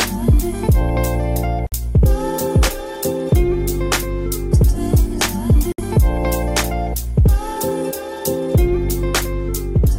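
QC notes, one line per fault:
1.67–1.72 s and 5.72–5.78 s, gap at a join of encoded pieces: the audio was encoded in separate chunks about 4.0 s apart and spliced without trimming each run's start-up delay and end-of-stream padding, so that dead time stays in at each join. This opens a silence of 54 ms and then 64 ms in continuous sound, with abrupt edges softened by the codec, after which the sound resumes from where it stopped.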